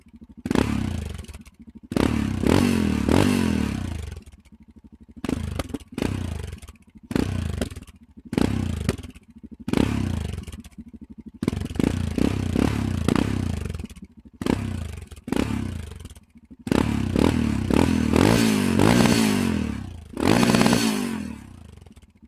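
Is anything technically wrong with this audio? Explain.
Yes. A noise suppressor designed for speech was left on throughout, treating steady sound and decaying tails as noise. The level pumps by roughly 15 dB, thinning held sound while sudden onsets pass.

The sound cut by the noise suppressor is clearest at 0.00–1.94 s (about one second affected, drops of about 15 dB), 4.08–11.41 s (about four seconds, about 16 dB), 13.88–16.69 s (about two seconds, about 15 dB) and 19.76–22.28 s (about 16 dB). In these stretches, sustained sound sinks and decays are cut short.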